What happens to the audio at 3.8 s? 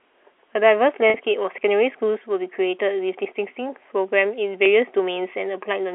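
Nothing goes wrong at 3.8 s: the audio carries on intact there, still with the narrow telephone band of the G.711 line.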